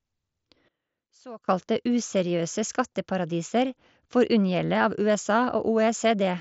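A speech recording carried over a Bluetooth mSBC headset link, with its band stopping near 7.7 kHz and a light graininess on louder passages. From 0.68 to 1.48 s the speech collapses by about 20 dB into a faint residue, then returns at full level. That sudden loss of the centred content points to one channel inverted, likely, with the stereo pair summed to mono so the shared signal cancels and only the inter-channel difference survives.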